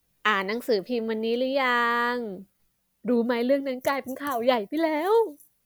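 No technical faults can be heard anywhere in this speech recording, and the signal stays continuous and stable throughout.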